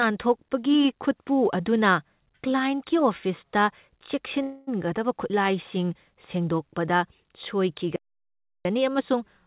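At 4.42 s the incoming packets were most likely held up on the network, so the jitter buffer ran dry and the receiver had to invent sound until they arrived. The result is a call audio freeze lasting until 4.69 s: the last sound is stretched into a fading buzz or hiss for about 0.25 s, then the speech resumes exactly where it left off. Nothing is lost, but everything after it now runs about 0.25 s late.

From 7.96 s to 8.65 s the player likely ran out of data or its thread was blocked, producing a playback stall. The output drops to silence for about 0.69 s in the middle of the speech, then carries on. Both events sit on a call path whose G.711 A-law coding leaves nothing above 4 kHz, giving the speech its narrow telephone sound throughout.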